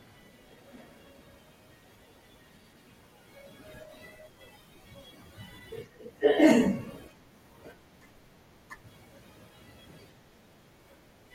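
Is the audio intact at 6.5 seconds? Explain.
No. A wireless microphone noise hit runs from 6.48 to 6.53 s. The radio signal briefly fades, so receiver noise rises into a short burst of static.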